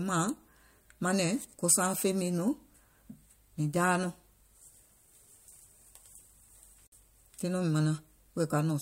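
At 6.87 s a gap at a join of encoded pieces opens a 54 ms gap in the speech. Unlike a dropout, nothing is lost; it resumes exactly where it stopped.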